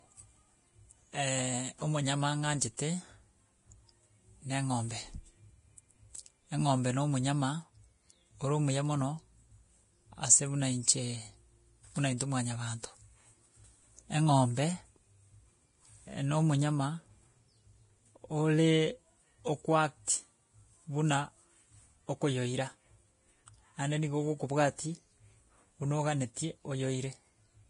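The whole clip is hissy and grainy with nothing above 10.5 kHz, heavy damage that's likely Vorbis compression at a low rate, something around 30 kbps. At 2.77 s there's a pre-echo: a short hiss about 14 ms long smears in ahead of a sharp attack, quantisation noise leaking into the quiet before it.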